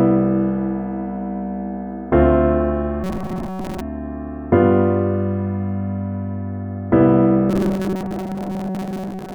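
From 3.04 to 3.81 s, and again from 7.50 to 9.35 s, the sound becomes a rigid, metallic buzz locked at 188 Hz. This is robotic sound from repeated short buffers. Playback likely ran short of new data and looped a slice of about 5.3 ms, skipping most of the real audio.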